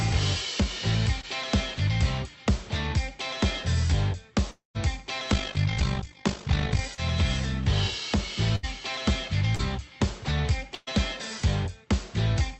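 At 1.21 s comes the first short concealed packet loss: about 20 ms failed to arrive, and the decoder extended the preceding sound to cover it. It is a brief smear or wobble. On a spectrogram, the harmonics or noise just before the gap stretch forward slightly, with a soft seam where the real audio resumes.

From 4.51 to 4.77 s there is a long network dropout of roughly a quarter second. The sound continues as a fading buzz or hiss, then goes silent for about 150 ms before the audio returns further on, most likely because packets stopped arriving for that stretch. The waveform shows a decaying tail followed by a flat section, and the spectrogram goes blank there.

Between 5.30 and 6.81 s, overlap-add ripple causes the level to pump about 50 times a second, by about 11 dB. Frames were windowed and recombined with overlaps that do not sum evenly, so this comes across as a fast, robotic flutter. 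The waveform envelope shows regular scallops, and the spectrogram shows vertical banding.

Further short concealed losses, each about 40 ms, occur at 6.95 s and 9.55 s. Both are filled by continuing the previous sound and leave the same brief smear.

Bursts of packet loss occur at 8.56–8.65 s (about 80 ms) and 10.75–10.89 s (about 120 ms, ending in a tiny silence). At each, the last sound holds as a buzz or hiss that fades before the audio jumps ahead. On a spectrogram, each burst appears as a smeared, decaying patch with a discontinuity where the audio resumes.

Throughout the clip, the content stays band-limited to about 8 kHz, consistent with the call codec on this path.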